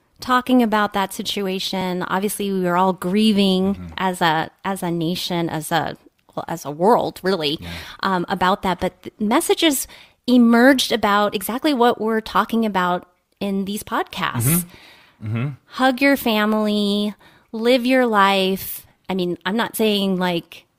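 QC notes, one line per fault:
1.81, 9.81, 13.80, 19.79 s: overlap between stream segments. At these 2-second segment boundaries, overlapping timestamps made the player discard about 8 to 17 ms of speech that was never actually duplicated, so the waveform jumps and each boundary produces a brief click or skip.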